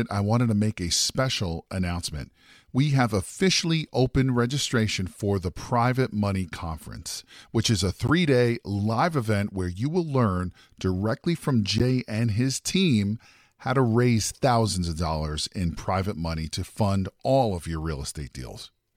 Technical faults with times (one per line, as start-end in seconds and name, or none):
8.08-8.10 corrupt frame decoded
11.78-11.81 corrupt frame decoded